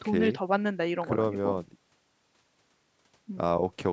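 Speech clip, no technical faults.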